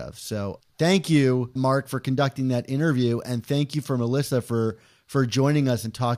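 Listening to the speech recording, nothing technical stood out anywhere in it.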